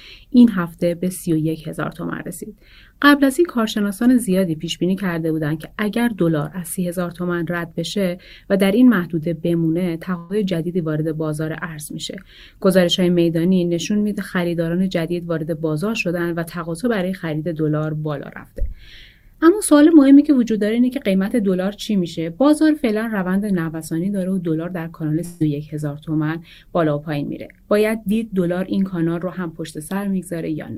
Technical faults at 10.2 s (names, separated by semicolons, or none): burst of packet loss